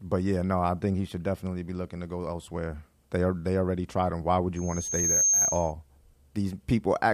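At 4.56 s a loudspeaker feedback squeal kicks in and runs until 5.73 s. The mic is hearing the speaker it's driving, and at around 6.4 kHz the loop gain tipped past one, so that frequency keeps feeding itself. You hear a thin, piercing tone swell up over a bit under a second until it's sitting about 5 dB above the speech. Then it cuts out at 5.73 s.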